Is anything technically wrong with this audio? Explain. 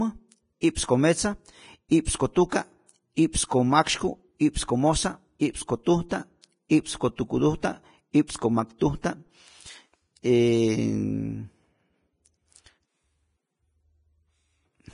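Yes. Throughout, the speech is band-limited with nothing above 10.5 kHz, and its treble is hissy and grainy, likely from heavy Vorbis compression at a low bitrate near 27 kbps.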